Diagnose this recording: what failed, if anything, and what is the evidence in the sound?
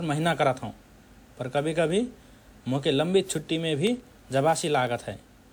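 Codec stage: the speech sounds swirly, smeared and hollow throughout, with blurred consonant attacks, though bandwidth extends to 20.1 kHz. That points to likely generation loss from around seven WMA re-encodes near 128 kbit/s, each pass re-quantising on a shifted frame grid and compounding noise and spectral holes.

Driver or buffer stage: periodic USB or driver dropouts produce regular ticks every 0.125 s from 3.87 s to 5.37 s, about fifteen in all. A blocking background task starves the stream at a fixed interval, and each gap of roughly a tenth of a millisecond is filled with silence.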